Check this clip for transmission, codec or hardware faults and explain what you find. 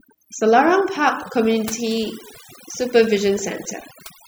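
The one thing going on here is overdone noise removal, and it runs the whole length of the speech. The noise reducer was pushed too hard: any frequency band that sits close to what it thinks is noise gets pulled way down or switched off, and the softer parts of the talker go along with it. So the background drops and breaks up into little twinkly specks.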